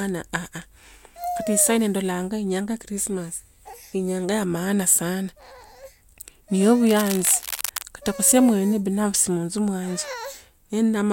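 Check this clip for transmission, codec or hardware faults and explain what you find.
One hardware fault stands out: cable scratch noise from 6.87 to 7.83 s, just before "katokho semwini binafsi monzo". A worn cable or connector is likely being moved, so its contact resistance jumps erratically. That adds dense, uneven scratching roughly 10 dB below the speech. A spectrogram shows ragged broadband smears, and the waveform shows jagged spiky bursts.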